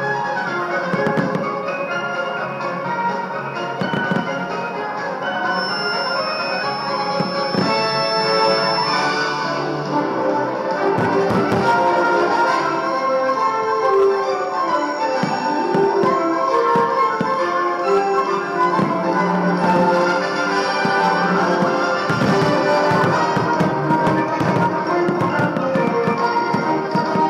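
A feedback whistle runs from 5.46 to 9.12 s: a thin, steady tone at 5.3 kHz sitting around 10 dB below the main sound, swelling and fading slowly in level as it holds. The likely cause is a loudspeaker-to-microphone loop hovering at the edge of feedback, where the gain around the loop at that one frequency is just high enough to keep ringing, yet not enough to climb into a full howl.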